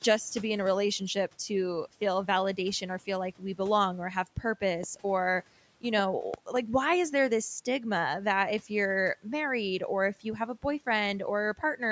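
A loud pop hits at 4.83 to 4.86 s, about 10 dB above the speech, then a double pop at 6.34 to 6.58 s, about 15 dB over, likely voltage spikes from a plug, switch or static.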